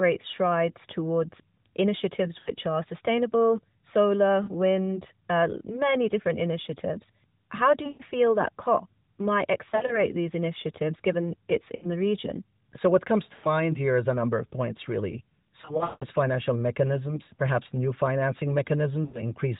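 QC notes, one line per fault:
2.40–19.21 s, lost AMR speech frames: radio errors corrupted frames, so the decoder reused the last good pitch and vocal-tract settings at falling gain. Each event sounds like a short smeared warble or a drawn-out fade, and the sound returns briefly weak or rough. The events fall at 2.40 s (after "strides towards initiatives"), 4.44, 7.84, 9.70, 11.76, 13.34 (after "what comes"), 15.62–16.06 (the worst, with a 180 ms run that fades almost to silence), and 19.06 s (after "mechanisms perhaps new financing").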